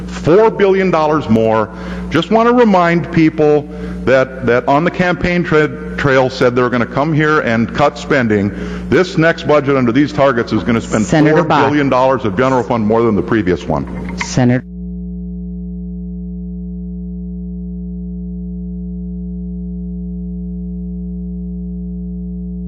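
Gain pumping runs throughout, with the level swinging roughly 15 dB, likely from input gain set far too high into a fast limiter. Unlike a noise gate, the background never drops to silence.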